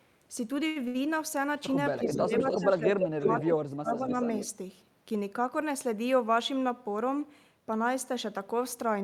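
At 0.67 to 0.78 s and 0.88 to 0.97 s come two short stalls from late packets: the jitter buffer ran empty, so the sound is held for 83 ms and then 69 ms, with nothing lost. From 1.89 to 3.42 s an echo leak sets in, a copy of the speech arriving 290 ms late at roughly the level of the speech itself. This is likely residual echo the canceller failed to remove. Overlapping this, between 1.99 and 4.13 s, the speech is suppressed in double talk: for about one and a half seconds in total it dips by as much as roughly 25 dB while the canceller likely attenuates both sides. A second echo leak runs from 3.92 to 4.47 s, delayed 293 ms and well below the speech.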